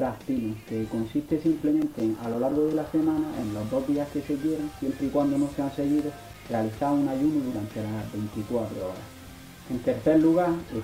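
CD scratch ticks occur from 1.65 to 2.86 s, then from 5.99 to 7.03 s. Each burst is a run of regular ticks, about seven a second. A blemish exceeds error correction once per disc turn. The player patches or mutes a few milliseconds.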